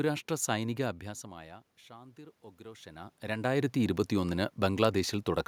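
From 1.02 to 4.03 s there's automatic gain rising: the level at the mic drops by about 22 dB around the time the talker moves back, and the AGC slowly pushes gain up by about 5 dB. The voice and room noise swell together over those three seconds.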